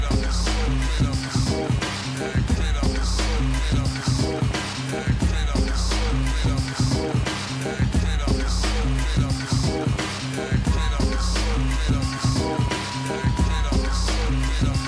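No technical faults can be heard anywhere in this audio.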